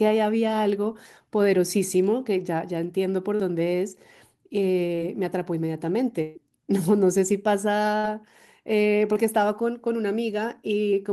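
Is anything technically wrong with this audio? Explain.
Yes, the speech is interrupted by packet loss in five places.

Short concealed packet loss occurs at 3.35, 4.95 and 9.13 s. Around 40, 20 and 20 ms of audio arrived too late, so the receiver extended the preceding sound to bridge each hole and then blended back. It is heard as a brief smear or wobble.

A burst of packet loss occurs from 6.22 to 6.37 s and from 7.97 to 8.05 s. About 140 ms and 60 ms went missing. Concealment carried the last sound forward and faded it, giving a held buzz or decaying hiss before the speech resumes with that stretch gone.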